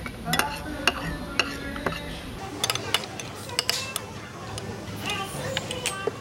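A clip of sounds. From 2.39 s to the end, a section at the wrong speed plays 1.8 times too fast. Pitch jumps up by roughly ten semitones along with it. Everything turns high and hurried. The likely cause is playback against the wrong clock.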